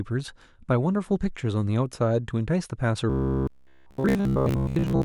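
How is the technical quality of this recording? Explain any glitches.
The recording has one clear glitch, confined to the final stretch. From 3.10 s to 5.05 s the speech takes on robotic sound from repeated short buffers. The likely cause is new audio failing to arrive in time, so playback keeps reusing a block of about 15 ms, with most of that stretch filled by repeats rather than fresh audio. That cycling imposes a fixed 66.7 Hz buzz, turning the speech into a stiff, metallic drone that only loosely tracks the words.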